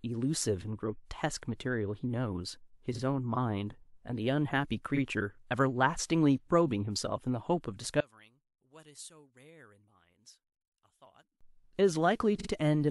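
At 2.95 s and again at 4.95 s the speech stutters as a single 46.4 ms block of compressed audio plays twice. At 12.38 s the same block plays three times, adding 92.9 ms. These are repeated frames. A dropout would leave a gap and shorten the audio, but here the same fraction of a second recurs and the speech runs longer.

From 8.00 s to 11.41 s the centred speech falls by about 28 dB and turns faint. What remains is only the small difference between the two channels. This is most likely one channel inverted, with the two channels cancelling when summed to mono. A simple level drop would shrink everything evenly, but here the centred voice nearly vanishes and only a faint remnant is left.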